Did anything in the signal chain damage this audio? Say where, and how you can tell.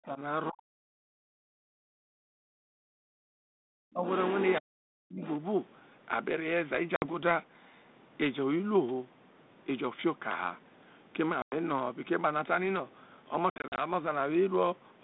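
Yes. In the call's echo canceller, speech was likely suppressed in double talk, with deep dips near 40 dB at 0.0–0.19, 0.5–0.7, 1.46–3.46 and 4.6–5.23 s, and a shallower one at 3.91–4.05 s.

The same echo canceller gated the background from 0.98 to 1.18 s, pulling the room sound down by about 39 dB before releasing it.

The other side's voice is leaking through, likely from incomplete echo cancellation, at 4.05–4.61 s and 5.23–5.35 s, sitting roughly 15–20 dB below the talker.

Packet loss on the ADPCM call, at the network stage, leaves hard silent gaps: 60 ms at 6.96 s, 100 ms at 11.42 s, and 160 ms scattered across 13.5–13.8 s. Each gap is followed by speech returning slightly distorted as the predictor resynchronises.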